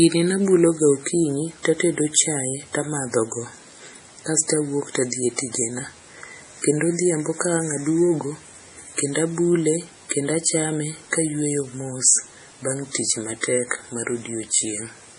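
Throughout the speech, the treble stops dead at about 10.6 kHz, and the remaining sound is watery and swirly, with metallic chirps on s sounds and smeared attacks. This is likely heavy MP3 compression, which fits a bitrate near 32 kbps. Short of bits, the encoder cut the top band and zeroed weak frequency lines frame by frame. On a spectrogram this appears as a flat ceiling at 10.6 kHz and speckled, flickering holes below it.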